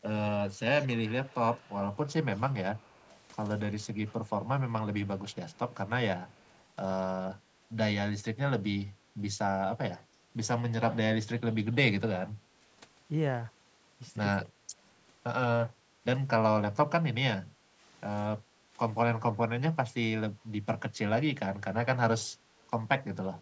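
From 0.53 to 3.19 s, a faint delayed copy of the speech trails the original by 225 ms. It sits about 20 dB below the talker. Two shorter scraps follow, from 5.3 to 5.59 s and from 6.29 to 6.64 s, each about 35 dB down with the same 225 ms lag. This is an echo leak. The likely cause is a far-end loudspeaker whose echo canceller let some of its own playback back into the microphone.

At 10.21 to 10.26 s, the speech briefly dips by roughly 15 dB. A longer, deeper hole follows from 14.46 to 14.76 s, about 30 dB down for around 300 ms. Another short dip of roughly 15 dB comes at 17.38 to 17.44 s. These sound like speech suppressed in double talk. Both sides were likely talking at once. The canceller could not tell the talker from the echo and turned everything down, so the speech thins and cuts out in pieces.

From 18.41 to 18.53 s, the room sound drops by about 6 dB for roughly 100 ms, then comes back. 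This is background gated by the echo canceller. While the loudspeaker played, the canceller clamped the microphone and took the ambience down with it.

At 23.29 to 23.34 s, near the end, one more double-talk dip of roughly 15 dB briefly cuts into the speech.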